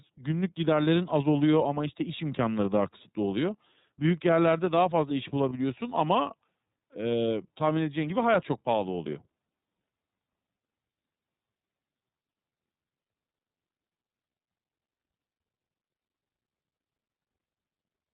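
Throughout, the speech carries iLBC codec damage, plainly audible. Nothing above 4 kHz survives, and each 30 ms frame is coded alone, which fits a 13.33 kbps mode. Voices sound rough and synthetic. At 5.49 s, lost iLBC frames leave a 30 ms gap. The decoder repeats the last pitch cycle with noise, giving a brief buzzy held vowel. The voice is right again almost at once.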